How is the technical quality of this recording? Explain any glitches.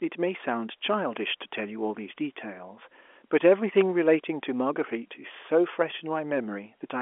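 One glitch stands out in what's otherwise a narrow telephone-band recording that fits G.711 coding, roughly 300 to 3400 Hz. At 3.81 s there's an electrical switching spike: a sharp snap riding on top of the speech. It's likely a nearby switch, motor or static discharge throwing a brief arc that the audio line picked up, which is why it lands as a tight click rather than anything blended into the sound.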